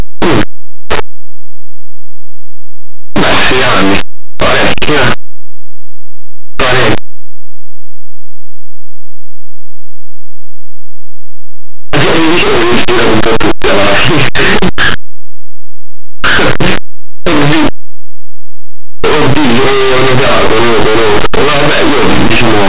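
Throughout, linear 8-bit speech samples are decoded as mu-law codes, so this is linear audio read as companded. Small values just one side of zero expand to near-maximum outputs, turning the speech into very loud, harsh distortion.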